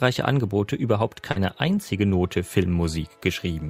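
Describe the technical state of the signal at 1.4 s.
Short concealed packet loss runs from 1.31 to 1.38 s, ending just before 1.4 s. About 40 ms never arrived, and the receiver bridged the hole by extending the preceding sound before blending back. Unlike a plain dropout, there is no silence, only a brief smear or wobble.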